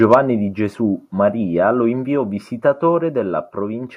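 From 0.03 to 0.15 s, the loudest peaks sound flattened and harsh, with a crackling edge. This is microphone overload. The input likely ran about 4 dB past the converter's limit, so the tops of a small share of waveform peaks were sliced off.

At 0.14 s, right after that distorted stretch, the whole signal drops by about 3 dB at once. Two more sudden drops follow, about 1 dB at 2.16 s and about 2 dB at 3.18 s. This is the microphone volume being stepped down. Each step lowers voice and background together.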